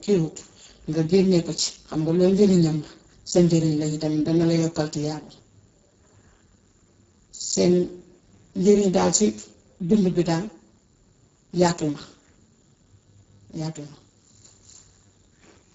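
Speech runs through the Speex codec for the whole clip, with heavy damage. The sound is hoarse and noisy. That fits a very low bitrate near 6 kbps, where the CELP coder has too few bits to model the excitation properly. Nothing is present above 7.6 kHz. The upper band that remains sounds like shaped noise rather than real detail.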